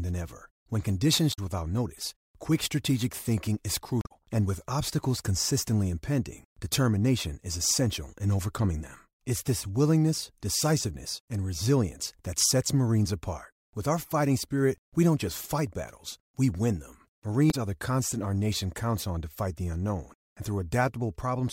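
Three short hits of damaged data in a compressed stream: 1.29–1.39 s, just before "without notice quick strategic"; 4.01–4.12 s, after "quick strategic thinking is"; and 17.47–17.54 s, after "battles we win them". Each time the decoder chokes on corrupted frames, loses sync and hunts for the next header, which comes out as a quick glitch.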